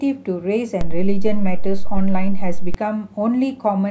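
At 0.81 s the speech picks up a DC step. The zero line of the waveform jumps suddenly to an offset of about -11 dBFS, as if a converter recalibrated or an offset input was switched in. That jump is heard as a low thump. The offset holds until 2.74 s, when the baseline steps back and a second thump follows. Between the two, the speech itself carries on unchanged.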